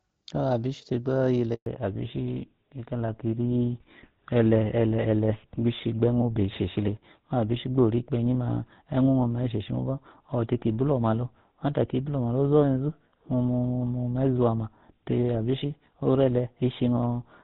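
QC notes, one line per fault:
1.54 to 1.66 s, handover gap: right after "abishi tegba" the speech fades within a few tens of milliseconds into 120 ms of clean silence while the call switches networks. Unlike packet loss, there is no concealment buzz or repeated fragment, just a hard hole.
1.66 s to end, fallback to narrowband: once the new link starts, everything above 4 kHz vanishes and the speech turns duller and rougher. That fits the call dropping from AMR-WB HD Voice, light codec damage before the switch, to a GSM full-rate codec. A filtered recording would not change at a handover.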